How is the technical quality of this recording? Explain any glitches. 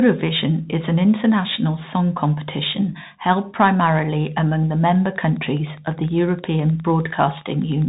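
The recording has two clear technical problems. One runs through the whole clip and one appears near the end.

A Bluetooth CVSD headset codec shapes the speech from start to finish. Nothing above about 3.8 kHz survives, so the audio sounds narrow and telephone-like. The damage is plainly audible. The codec sends one bit per sample, saying only up or down, with an adapting step size. That fits a 64 kbit/s CVSD link. When loud, bright sounds change faster than the step can follow, they distort, and s sounds turn scratchy. A fine, grainy hiss sits under the speech.

Wi-Fi interference begins at 4.79 s and lasts to the end of the clip, at 7.88 s. A nearby Wi-Fi radio sends beacons every 102.4 ms. The audio circuitry picks them up and rectifies them into sound. The result is a steady ticking, close to ten ticks per second. It is faint, well below the speech.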